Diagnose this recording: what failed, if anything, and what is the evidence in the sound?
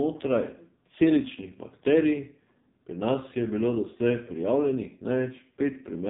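The failure is at the codec stage: the whole speech clip has gone through the AMR narrowband mobile codec, and hard. Nothing above about 3.8 kHz survives, so the voice sounds boxed in and dull all the way through. The speech is buzzy and synthetic, which fits one of AMR-NB's lowest modes, around 6 kbps. At that rate the encoder rebuilds each 20 ms frame from a vocal-tract model fed by very few pulses, and that's where the artificial timbre comes from.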